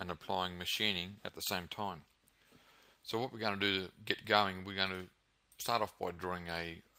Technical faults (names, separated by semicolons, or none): none